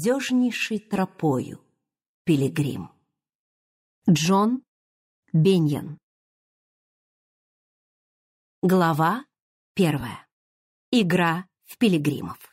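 Lost LE Audio frames at 0.97 s and from 10.00 to 10.03 s leave brief noisy smears, about 15 ms and 22.5 ms long, where the LC3 decoder repeated the last spectrum with randomised signs, fitting two and three lost 7.5 ms frames, while the light lossy compression leaves at most a faint watery texture on noise and attacks.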